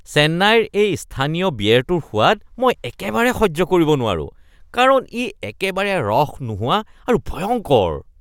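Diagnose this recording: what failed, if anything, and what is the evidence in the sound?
Nothing failed: the sound of this recording gives no evidence of any fault.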